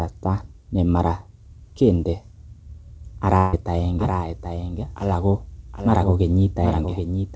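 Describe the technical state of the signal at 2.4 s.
At 2.4 s the speech is intact, with no fault at that moment, only the call codec's band limit leaving nothing above 8 kHz.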